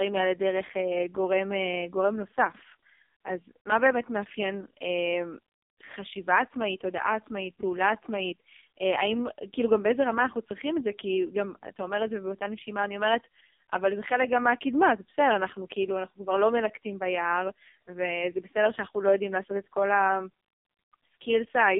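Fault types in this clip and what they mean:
AMR narrowband mobile codec: The speech went through the AMR-NB phone codec at a very low rate, consistent with its 4.75 kbps mode. The band is squeezed to about 250 Hz to 3.7 kHz, and the heavy coding leaves the voice buzzy, thin and synthetic throughout.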